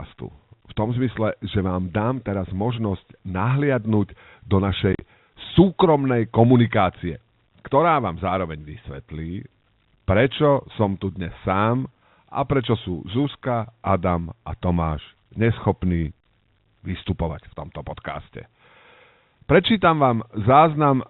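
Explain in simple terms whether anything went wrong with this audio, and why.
Between 4.93 and 5.01 s, packet loss filled with silence cuts the speech into brief gaps, about 60 ms in total, the longest 40 ms.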